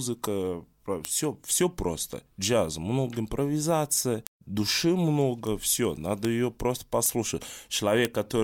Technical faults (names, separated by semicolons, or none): bit error spike